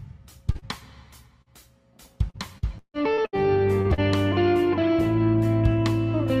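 Short concealed packet loss occurs at 0.51, 0.59, 1.42, 3.82 and 3.94 s. Each time about 40 ms fails to arrive and is patched by extending the preceding sound, giving a brief smear or wobble. From 2.30 to 3.41 s, repeated packet loss (robotic sound) produces six concealed gaps, the longest 154 ms, covering about a third of the span. The audio turns choppy, with pieces missing.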